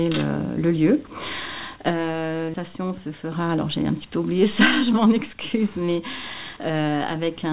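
The audio comes through a narrowband call path, with nothing above 4 kHz, which fits G.711 mu-law at 64 kbps. From 4.60 to 5.96 s there's a jitter buffer speed-up. The receiver's buffer had built up more audio than it wanted, so it trimmed a string of tiny pitch-period-sized chunks, about 100 ms in total, to catch up. That stretch plays roughly 6% fast at unchanged pitch, so it sounds a little rushed.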